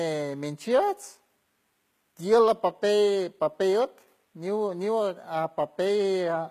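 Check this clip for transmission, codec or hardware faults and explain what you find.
One codec fault runs through the whole speech clip. HE-AAC compression, throughout: treble likely copied up from lower bands, so s sounds turn gritty and metallic, nothing above 14.9 kHz, fitting roughly 20 kbps.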